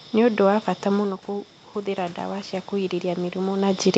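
From 1.26 s, just after "bata mũno", there's automatic gain rising: the input fell about 10 dB, so the gain creeps up about 7 dB, swelling voice and room noise together.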